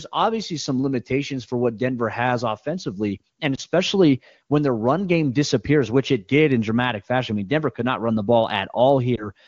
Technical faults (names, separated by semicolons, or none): lost AMR speech frames